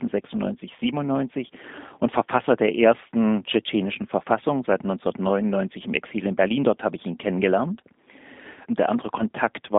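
G.729 codec damage runs throughout: speech rebuilt from a vocal-tract model and sparse pulses, band-limited to about 200 Hz–3.6 kHz, sounding rough, buzzy and synthetic, consistent with 8 kbit/s.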